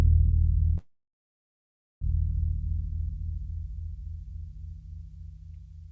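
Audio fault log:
0.78 to 2.03 s, call audio freeze: The music stops and the gap lasts about 1.23 s. A brief fading tail of the last sound comes first, then about 1.14 s of silence. The likely cause is packets held up in transit, leaving the jitter buffer empty. When they arrive, the music carries on from where it stopped, so nothing is lost. Everything after the gap runs about 1.23 s late, still band-limited to 8 kHz by the call codec.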